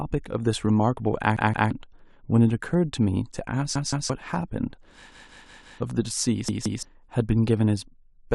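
Repeated buffer stutters hit the speech at 1.37–1.71, 3.76–4.10, 5.12–5.80 and 6.49–6.83 s. New audio arrived late, so the same 171 ms chunk (fits an 8192-sample buffer) replays with hard joins, twice each, four times at 5.12 s, skipping around 0.3 s, nearly 0.7 s there.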